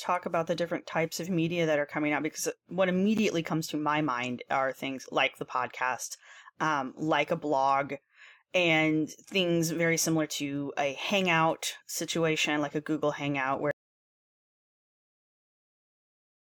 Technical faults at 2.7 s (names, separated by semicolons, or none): none